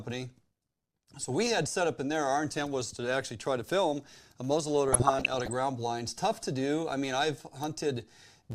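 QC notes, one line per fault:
4.89–5.53 s, DAB burbling: just after "try to film a", the speech breaks into short blips of noise in single sub-bands for about 0.64 s. A weak signal let bit errors, roughly half a percent, slip past error correction into the MP2 audio data.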